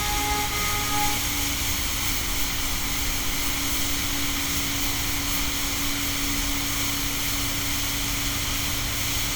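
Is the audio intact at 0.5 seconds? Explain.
Yes, at 0.5 seconds the sound plays cleanly, with no dropout, click, distortion or other fault.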